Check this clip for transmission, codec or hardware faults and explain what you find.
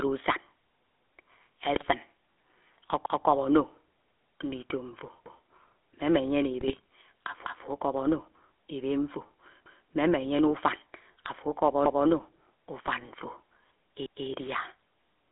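The speech carries three faults: GSM full-rate coding throughout, two bursts of GSM bit errors, and five stutters from overlapping chunks.

GSM full-rate codec, whole clip: the voice sounds buzzy and gravelly, confined to a narrow band of roughly 250 Hz to 3.5 kHz. This is the coarse, pulse-driven vocal-tract model of the 13 kbps full-rate codec, which discards fine excitation detail and all high frequencies.

GSM bit errors, 1.74 to 1.85 s and 6.60 to 6.84 s: the speech suddenly squawks and gargles, the second burst longer than the first. Corrupted bits reached the decoder and scrambled its filter, pitch and gain values for several consecutive frames.

Overlapping chunks, at 3.06, 7.46, 9.66, 11.86 and 14.06 s: a brief stutter where a 200 ms fragment plays twice, recurring every 2.2 s from 7.46 s on. The audio was handled in 2 s chunks, each starting before the previous one ended, so every join repeats a slice.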